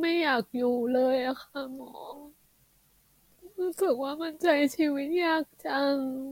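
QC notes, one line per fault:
Nothing stood out on listening to this speech recording.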